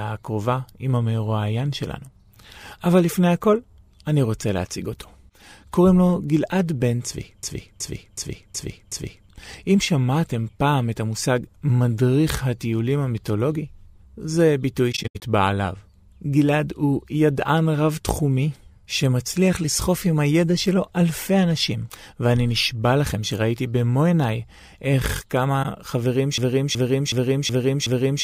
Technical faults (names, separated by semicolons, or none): system hang loop; AAC frame loss with muting